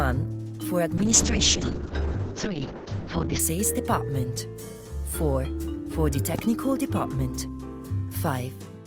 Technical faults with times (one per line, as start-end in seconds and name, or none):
0.98-3.45 call bitrate drop
6.35-6.41 loud pop